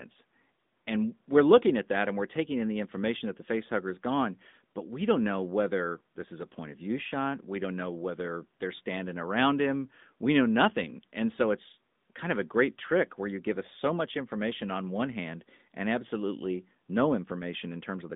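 AMR narrowband mobile codec, throughout: the speech is rebuilt by a mobile coder from a vocal-tract model driven by sparse pulses. Nothing passes above 3.8 kHz, the band spans 150 Hz to 3.7 kHz, and a plainly audible buzzy, synthetic edge fits a 10.2 kbps mode.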